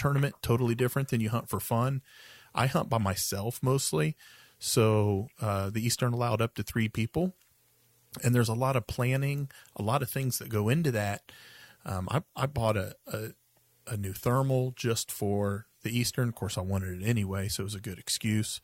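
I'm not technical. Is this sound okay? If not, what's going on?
Yes, nothing in this speech recording points to a technical fault.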